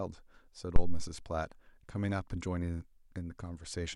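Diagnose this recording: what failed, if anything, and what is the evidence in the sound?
A phantom power thump hits the analogue input stage. At 0.76 s a deep, low thump cuts through the speech. It peaks at about -12 dBFS and dies away within roughly 88 ms. Its tail is gone by 1.15 s. The cause is a supply switched on or off while the input was live. That sudden voltage step passes through the coupling capacitors and reaches the preamp as one low-frequency pulse.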